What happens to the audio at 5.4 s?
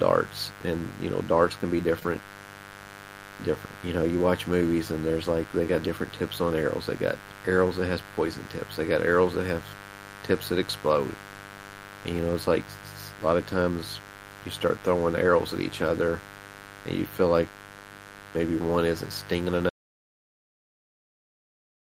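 Mains buzz runs through the whole clip, including 5.4 s: switching spikes from the 50 Hz mains, twice in every cycle, leak in, adding a steady, raspy buzz not far beneath the speech.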